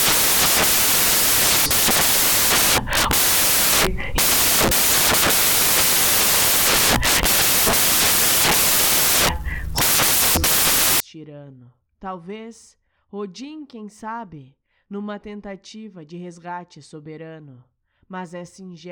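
Samples built from the wrong bytes run from 0.0 to 11.0 s in this speech clip. The reader misassembles each sample's bytes, so the rapidly changing low bits dominate. That produces loud, harsh noise, close to white on the louder sounds.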